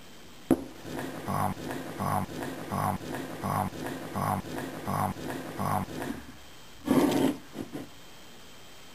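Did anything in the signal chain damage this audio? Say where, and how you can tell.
Yes. A broken-record loop from 1.53 s to 6.1 s points to a stall at the playback, encoder or stream stage. The likely cause is a buffer left resending its last fragment. A 0.72 s piece repeats exactly, six times back to back, and the audio due in that span is lost.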